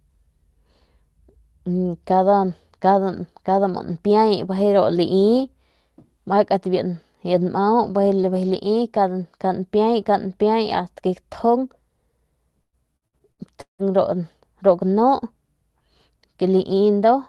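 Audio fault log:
12.61–13.92 s, repeated packet loss (robotic sound): six dropouts, longest 168 ms, each patched by stretching the last sound, so it turns choppy with pieces missing.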